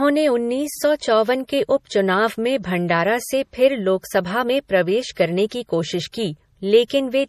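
MP3 compression runs throughout, with plainly audible watery swirl and nothing above 15 kHz. This is likely an MP3 encode near 40 kbps zeroing weak frequency lines. Pre-echo occurs at 5.15 s, 5.49 to 5.51 s, 6.12 s and 6.88 to 6.90 s. Each time, quantisation noise spread across a block leaks ahead of an attack as a 15 to 25 ms hiss, smearing it.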